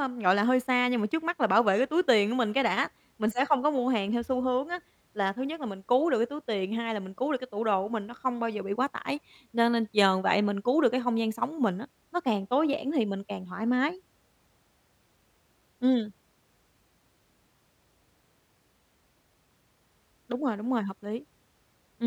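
Nothing technically wrong can be heard in this speech recording; the signal holds steady and continuous across the whole clip, with nothing in it that points to a fault in capture, processing or playback.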